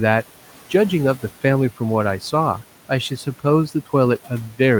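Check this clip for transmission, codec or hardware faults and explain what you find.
One fault runs through the whole speech clip: overdone noise removal. A noise reducer set too hard switches off frequency bands near its noise estimate. Quiet parts of the voice vanish with them. The background drops and breaks up into twinkling specks. The room noise, about 21 dB below the speech, belongs to the recording itself.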